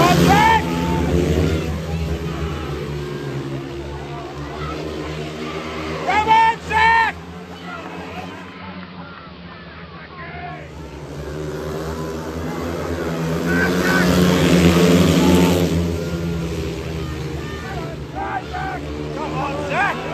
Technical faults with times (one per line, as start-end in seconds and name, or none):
8.32-10.77 digital radio blending to analogue